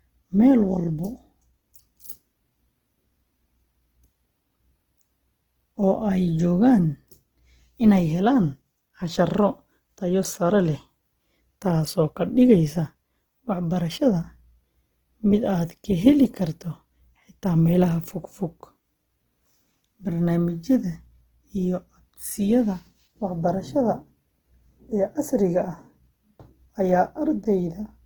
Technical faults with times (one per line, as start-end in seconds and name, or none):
0.00-28.06 Opus compression